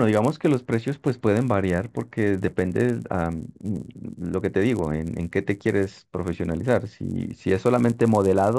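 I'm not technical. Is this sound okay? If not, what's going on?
No. A buzz runs under the speech throughout the recording, 100 times a second. That's a resampler restarted on every block: each 10 ms chunk was converted separately, leaving a tiny tick at every seam.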